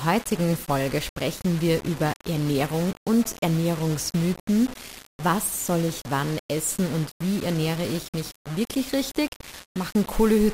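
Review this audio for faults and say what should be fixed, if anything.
Low bit depth without dither runs the full length: a grainy distortion that changes with the sound, sitting only about 15 dB below it. Unlike steady dither hiss, it swells and vanishes with the signal, and quiet passages sputter or drop to silence. This likely comes from rounding to 5 bits. To prevent it, keep at least 16 bits and apply dither whenever reducing word length.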